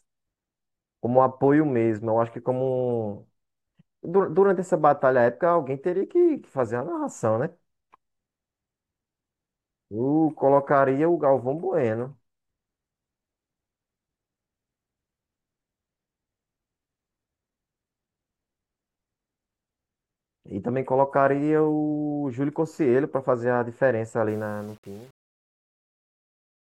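A speech recording whose closing fade-out, running from about 24.3 s to the end at 26.8 s, shows truncation distortion on a fade from 24.29 s onward, worst from 24.48 s to 26.79 s. The undithered gain stage, which fits an 8-bit word length, turns the quiet tail gritty. On a waveform the decaying signal collapses into blocky square steps, and a spectrogram shows broadband harmonic hash smeared above it.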